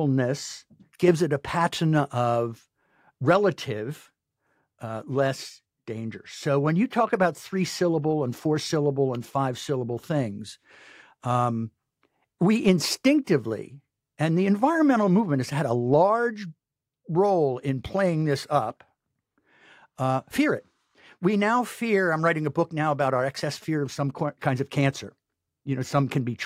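From 23.39 to 24.11 s, just after "book now about our", a galloping dit-dit-dit of short 217 Hz buzzes sits roughly 25 dB under the speech. These are GSM signalling bursts: a nearby 2G phone's radio pulses, rectified by the audio circuit.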